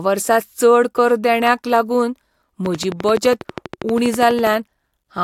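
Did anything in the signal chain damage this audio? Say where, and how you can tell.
Yes. A train of clicks runs from 2.66 s to 4.48 s, starting just after "चड कर देण्याक लागून". About twenty near-identical pulses arrive at a steady 12.2 per second and peak roughly 10 dB above the speech. The most likely stage is the analogue wiring or interface, picking up interference from nearby equipment. The regular spacing and matching pulse shape set it apart from random crackle or a one-off dropout.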